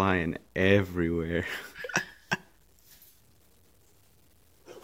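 From start to finish, a grainy, rough distortion rides on the sound and shifts with it. Quieter stretches turn gritty, and the faintest parts break up or sputter rather than fading smoothly. The error sits roughly 40 dB below the signal. The likely cause is low bit depth without dither: the audio was truncated to something like 10 bits, so the rounding error tracks the waveform instead of forming a steady noise floor.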